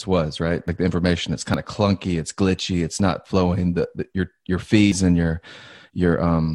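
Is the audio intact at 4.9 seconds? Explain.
No. At 4.92 s, between "the your your" and "and your", the speech skips ahead roughly 70 ms, likely a dropped buffer (overrun) joining the edges directly. The waveform shows an abrupt step with no gap, and the spectrogram a thin vertical broadband line.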